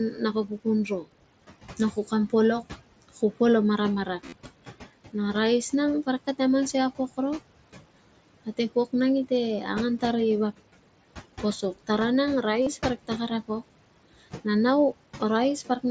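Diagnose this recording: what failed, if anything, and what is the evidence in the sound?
The call's noise suppressor is the first stage at fault. It is pulling down frequency bands it judges to be steady noise, frame by frame, for the whole of the speech. The background drops by about 18 dB in the gaps and swells back under each phrase, so the room noise pumps rather than sitting still.

The second fault is concealed Bluetooth headset packet loss on the link between headset and phone, at 4.26 to 4.33 s and again at 12.62 to 12.67 s. Each event hides about 45 ms of missing audio, which fits several lost frames. The first event is scattered over about 60 ms, with its longest gap about 30 ms. The receiver filled each gap by repeating the closest-matching recent stretch of waveform, giving a short buzzy, held tone and a small warble as real audio resumes. The mSBC codec's 8 kHz ceiling can be heard as part of the link.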